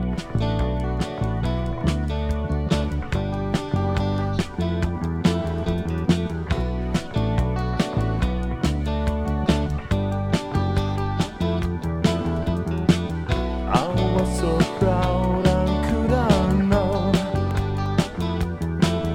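CD scratch ticks occur between 17.51 and 18.03 s: four brief ticks, each at most a couple of milliseconds long. Each one marks a disc rotation where scratch damage exceeded error correction.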